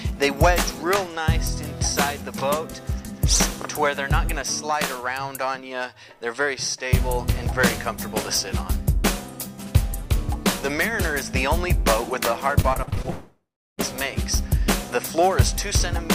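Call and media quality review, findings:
Repeated packet loss (robotic sound), 12.61 to 13.06 s. Six short holes, longest 33 ms, each patched by extending the preceding sound, so about a third of the span is filler. Choppy texture, pieces missing. Component: jitter buffer / packet loss concealment.

Long network dropout, 13.1 to 13.89 s. Roughly 0.68 s of audio never plays. A fading buzz or hiss continues the last sound, then about 0.37 s of silence before audio resumes past the gap. Likely cause: transport interruption, concealment exhausted.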